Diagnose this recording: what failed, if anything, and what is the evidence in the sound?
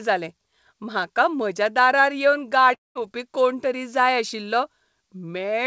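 Long network dropout, 2.74 to 2.97 s, at the network stage. The last sound is drawn out as a fading buzz that sinks to near silence, then the speech resumes without the intervening 0.22 s. Packets likely never arrived, and the receiver concealed the gap.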